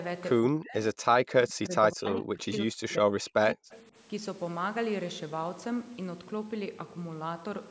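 From 0.47 to 0.78 s and again from 0.94 to 3.72 s, speech drops by up to about 40 dB in pieces, likely speech suppressed in double talk; waveform gaps and blank spectrogram patches mark it. At 3.70 s, echo leak briefly returns a faint copy about 30 dB down and 175 ms late, likely from an unremoved loudspeaker path, seen as a weak repeated smear.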